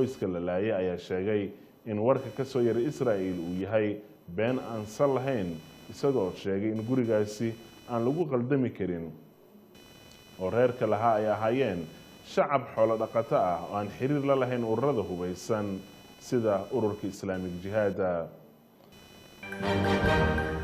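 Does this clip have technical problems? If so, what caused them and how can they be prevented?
Yes. Computer activity noise runs throughout the clip: a buzzy, chirping pulse of roughly 500 Hz sits about 25 dB below the sound, rising and falling with the machine's processing load rather than with the audio, as shifting currents disturb the shared ground. Isolating the audio interface's ground, for example with a ground-loop isolator or a separately powered interface, prevents it.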